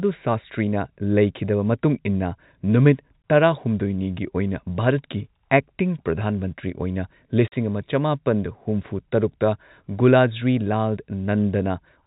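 Packets went missing and the receiver filled the gaps with silence. At 3.22 s a 20 ms hole cuts the speech. At 7.48 to 7.52 s, just before "ꯑꯃ ꯆꯃꯥꯄꯟ ꯍꯨꯝꯐꯨ ꯇꯔꯨꯛꯇ", a 40 ms dropout fits two 20 ms packets. Both holes are hard-edged and set against the 4 kHz-limited G.711 telephone band.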